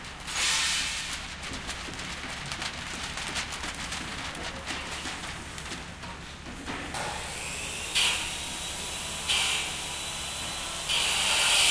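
Everyday sounds, with no audible technical fault anywhere in the recording.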